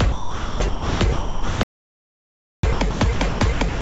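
From 0.06 to 3.81 s the sound is chopped by the voice detector. Gating likely switched transmission on and off, with about 2.66 s replaced by comfort noise. From 1.63 to 2.63 s there is an audio dropout to silence: a full second of silence with no room tone, likely from a lost input or link. The band stops at 8 kHz, consistent with a G.722 call path.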